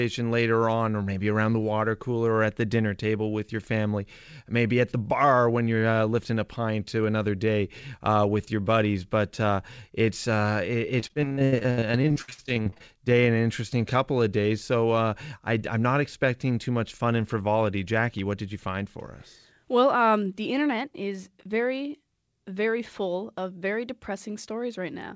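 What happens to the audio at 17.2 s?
Nothing goes wrong at 17.2 s: the speech continues intact through the call path, with no dropout, glitch or distortion at that point.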